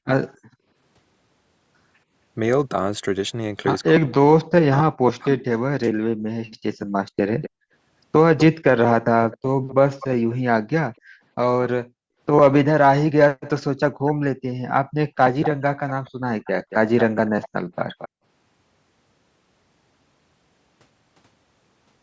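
From 3.95 to 5.45 s, speech is suppressed in double talk, likely because the echo canceller ducked the talker during overlap. The waveform sinks by around 40 dB in pieces totalling about a second, showing as dark gaps on a spectrogram.

Echo leak follows at 6.47, 7.41, 8.38, 9.31–10.35, 14.05 and 15.42–18.09 s. Delayed copies arrive roughly 230–270 ms late, faint to fairly strong, likely from an incompletely cancelled loudspeaker path. They appear as repeated, offset spectrogram patterns.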